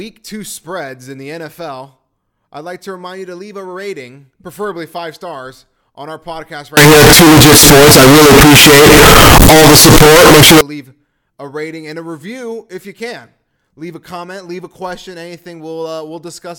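From 6.77 to 10.61 s, after "stars on our podcast" and before "leave a rating and", the speech collapses into very loud, harsh distortion, with quiet moments as loud as the rest. This is likely signed and unsigned mixed up on 16-bit samples, turning each zero crossing into a full-range jump.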